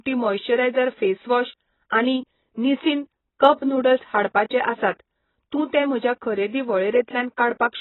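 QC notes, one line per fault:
Throughout, AAC compression. Nothing above 4 kHz, so the speech sounds dull and smeared. The heavy damage likely fits AAC-LC at about 16 kbps.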